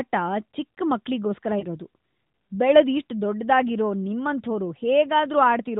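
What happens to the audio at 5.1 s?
At 5.1 s the speech continues without any fault, carried through the AMR narrowband mobile codec at 12.2 kbps with its usual cut-off at 4 kHz and nothing breaking in at that moment.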